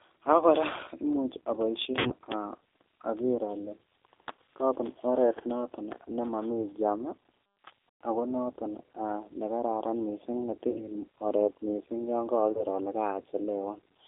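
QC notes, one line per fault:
Throughout, G.729 codec: band held to about 200 Hz–3.6 kHz, speech rough and synthetic from pulse-built excitation, consistent with 8 kbit/s G.729A rather than plain band-limiting.
1.99–2.12 s, 8.11 s, 10.70–10.84 s, 12.52–12.64 s, VoIP packet loss concealed by the speech codec: gaps of 60, 120, 60 and 30 ms stretched into fading buzzy tone or coloured noise, weak afterwards, not silent dropouts.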